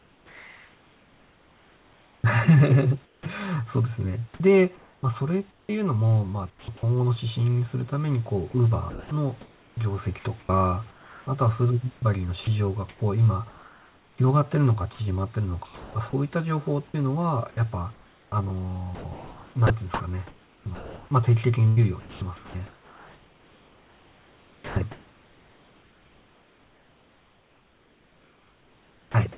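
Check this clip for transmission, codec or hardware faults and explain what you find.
The clip shows repeated voice-detector faults across the whole call. Nothing is heard above 4 kHz, which fits a narrowband G.711 path. The room noise sits about 35 dB below the speech.

Comfort noise in place of the background runs from 0 to 3.26 s. About 2.45 s of the real background is swapped for smoother synthetic noise of a different tone or level. This is likely discontinuous transmission. The sender stops during silence, and the receiver synthesises shaped noise instead.

The onset is clipped by the voice detector at 3.22 to 3.26 s. About 40 ms of the first sound is missing. The speech starts abruptly, without its soft lead-in. The detector was likely slow to notice the returning sound, so comfort noise filled the gap.

The sound is chopped by the voice detector over three stretches: 4.76 to 6.83 s, 8.51 to 16.13 s, and 17.51 to 29.37 s. 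In these stretches, 0.69 s, 2.34 s and 8.59 s are replaced. Parts of the speech give way to comfort noise, leaving holes in the sound. The detector likely toggled transmission repeatedly.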